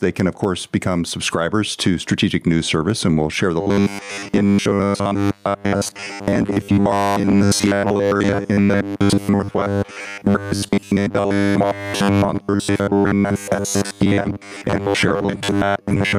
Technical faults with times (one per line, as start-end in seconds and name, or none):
0.00-16.19 gain pumping
3.61-16.19 robotic sound from repeated short buffers